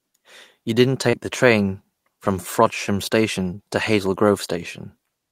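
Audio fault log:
1.09–1.15 s, short concealed packet loss: about 40 ms never arrived in time, so the decoder stretched the previous sound to cover it, leaving a brief smear right before "the train from".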